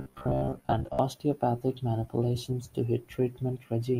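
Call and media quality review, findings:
Robotic sound from repeated short buffers, 0.02–0.99 s: metallic 66.8 Hz buzz, about half the audio replayed. Likely jitter-buffer underrun repeating a roughly 15 ms segment.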